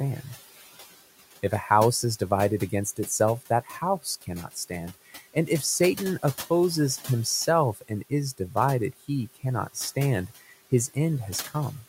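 Noise suppressor artifacts run through the whole clip. The suppressor pulls the steady room noise down by about 14 dB between phrases, then lets it back up under the speech.

Speech cut by the noise suppressor occurs twice, from 4.94 to 5.36 s and from 7.74 to 7.9 s. The suppressor mistook soft parts of the speech for noise and turned them down, by up to about 15 dB and about 13 dB. Roughly 0.15 s and 0.1 s of speech sound swallowed.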